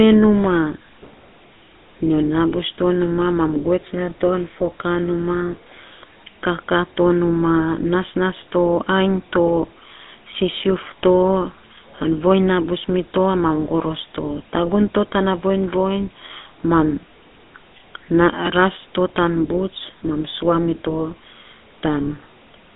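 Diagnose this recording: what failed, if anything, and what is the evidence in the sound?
The codec stage failed: the speech passed through a GSM full-rate codec for its entire length. The coder models the vocal tract and drives it with a sparse train of regularly spaced excitation pulses, which is why the speech carries a plainly audible buzzy, gravelly roughness from start to finish. The band runs from about 200 Hz to 3.7 kHz with nothing above 3.8 kHz, which fits a 13 kbps full-rate GSM coder.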